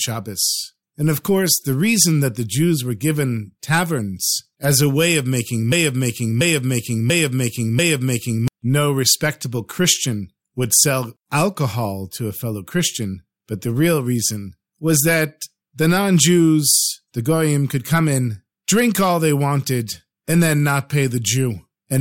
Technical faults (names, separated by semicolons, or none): broken-record loop